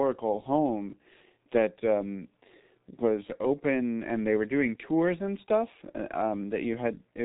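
From start to finish the speech sounds muffled and hoarse. Consonants smear into one another and nothing is heard above 3.8 kHz. This is the G.723.1 codec under heavy strain. It codes speech in 30 ms frames and models the voice coarsely, which fits a rate near 6.3 kbit/s. The slow, blocky updates blur fast transitions and leave that rough, dulled timbre.

At 3.06 s and again at 5.53 s there is a brief crackle on a loud peak. This is hard clipping: the signal overshot the stage by only about 1 dB, so those peak tops were sliced flat. The flattening is short and shallow, but it adds high-frequency harmonics that show up as a quick, gritty tick.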